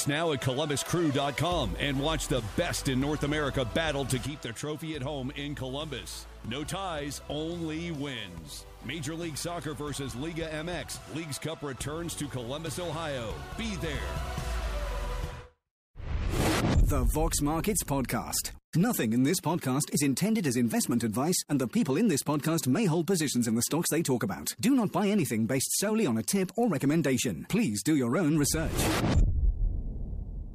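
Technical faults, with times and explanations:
4.26 s to the end, one channel drops out: the level falls abruptly by about 6 dB and stays down, likely from losing one of two matching channels.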